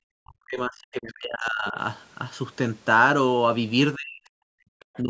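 From 0.05 to 1.76 s the talker's level collapses in pieces, dropping by something like 40 dB at its deepest for roughly a second and a half. The same happens from 3.95 to 4.43 s, and a shallower dip of around 10 dB appears from 5.02 to 5.09 s. This is likely speech suppressed in double talk: with both parties speaking, the echo canceller turned down the wanted signal along with the echo. Unlike a network dropout, the gaps follow the other side's activity rather than falling at random.

Between 4.8 and 5.0 s a faint second voice sits underneath, far below the talker, perhaps 30 dB down. This is likely the other side's voice leaking through, residual loudspeaker echo the canceller failed to remove from the microphone. It differs from crosstalk or background chatter because it is a brief scrap of the far end's speech rather than a steady, independent source. The call's microphone band limit, with nothing above 8 kHz, is heard normally across the clip.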